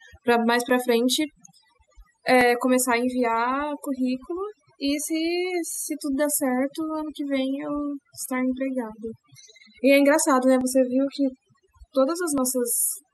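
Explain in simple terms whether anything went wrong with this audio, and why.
Two things went wrong. The first runs through the whole speech recording: overdone noise removal. A noise-reduction tool was set too aggressively. It treated anything close to the background noise as unwanted and turned it almost off, including the softer parts of the voice. The background drops and breaks up into twinkling, warbling specks.

The second is five short, sharp clicks at 0.69, 2.41, 5.76, 10.61 and 12.38 seconds. Each is a single tick and does not interrupt the speech. The likely cause is dropped samples. A tiny piece of the recording, well under a millisecond long, went missing, so the sound wave jumps abruptly from one point to a later one. That sudden jump is what makes the click.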